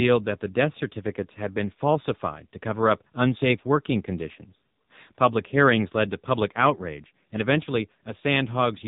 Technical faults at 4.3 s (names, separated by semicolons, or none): AMR narrowband mobile codec